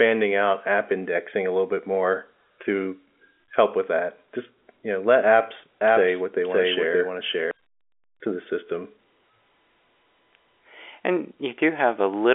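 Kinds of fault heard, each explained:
Doubled audio track: after "you know let apps", a dry copy trails about half a second behind at similar level, cutting in and out abruptly, likely a misaligned edit.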